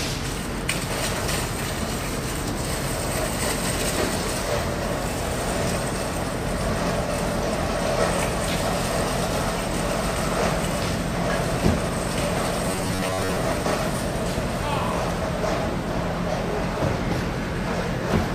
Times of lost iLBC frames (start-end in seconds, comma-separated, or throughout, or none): none